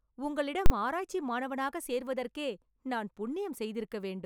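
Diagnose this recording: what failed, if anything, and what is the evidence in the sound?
A processing calculation produced invalid numbers that were clamped to full scale for a 40 ms block, giving one loud bang from 0.66 to 0.70 s, just before "ஆராய்ச்சி மாணவனாக சேர்வதற்கே நான்".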